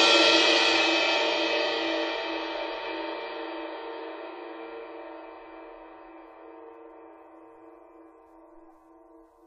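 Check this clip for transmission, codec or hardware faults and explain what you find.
One codec fault is present in the music. From 1.15 to 1.20 s, compressed frames are skipped. Missing or rejected frames make the audio jump ahead by about 50 ms.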